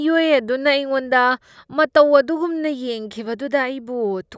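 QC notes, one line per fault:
No audible faults in this recording.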